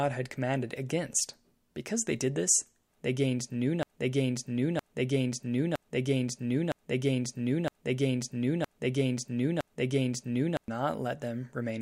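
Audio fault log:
3.83–10.68 s, broken-record loop: a 0.96 s slice of speech repeats exactly, back to back, seven times, and the speech that belonged there is lost. The likely cause is a stalled player or stream resending its last fragment. Unlike echo, the copies are identical and nothing continues beneath them.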